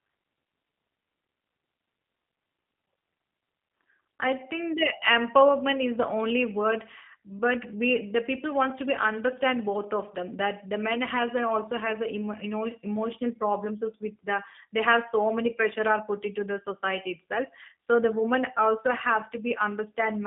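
From start to finish the speech carries G.729 codec damage, plainly audible. The sound is confined to a telephone band of roughly 200 Hz to 3.5 kHz, with nothing above 3.7 kHz. Voices come across slightly rough and synthetic because the codec rebuilds each 10 ms frame from a vocal tract filter, a pitch predictor and a few pulses rather than the actual waveform. This character fits the 8 kbit/s G.729A variant.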